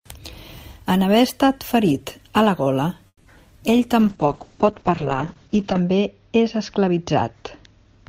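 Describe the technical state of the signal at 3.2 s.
At 3.2 s there's a call audio freeze, running 3.07 to 3.26 s just after "ferit a la gola". The last sound drags on as a fading buzz, dropping to silence near the end, then resumes where it stopped. That's likely late packets draining the jitter buffer, adding about 170 ms of delay with nothing lost.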